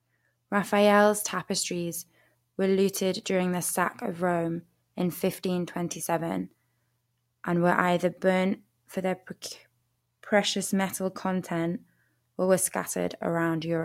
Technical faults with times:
none

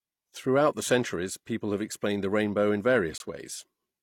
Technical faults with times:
3.18-3.20 gap between stream segments

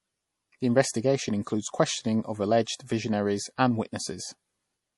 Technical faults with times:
0.00-4.97 MP3 compression

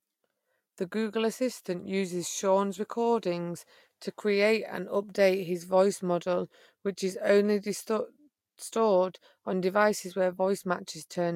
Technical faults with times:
none

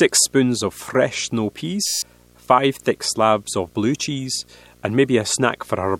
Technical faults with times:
0.00-5.99 video or display buzz
1.86-2.02 system hang loop

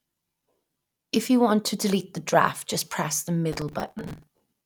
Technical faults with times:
3.52-4.43 processor overload crackle

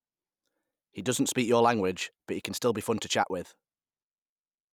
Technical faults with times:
none

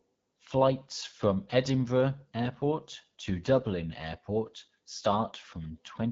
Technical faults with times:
0.00-6.11 AMR wideband (HD Voice) codec

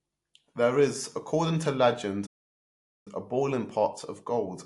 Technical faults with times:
0.00-4.65 MP3 compression
2.26-3.08 playback stall

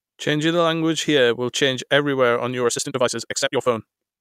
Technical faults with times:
2.62-4.21 time-stretched section

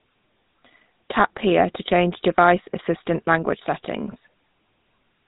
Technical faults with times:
0.00-5.28 GSM full-rate codec

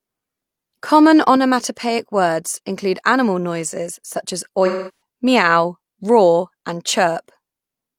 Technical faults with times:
4.66-4.99 AAC frame loss with concealment

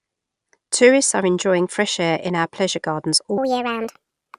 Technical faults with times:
3.38-4.38 wrong sample rate

